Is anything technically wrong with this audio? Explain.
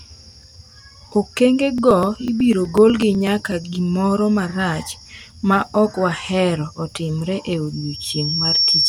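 Yes. From 1.78 s to 3.64 s, just before "gimoro marach ma ok", the speech carries a steady train of small ticks, one every 0.124 s, about fifteen in all, heard only while the voice is sounding. These are periodic USB or driver dropouts. Something stalls the USB bus or audio driver on a fixed cycle, and each time roughly a millisecond of audio is skipped outright. The waveform jumps across each gap, producing the regular clicks.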